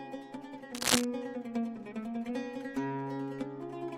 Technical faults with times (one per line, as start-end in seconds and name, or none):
0.73-1.05 cable scratch noise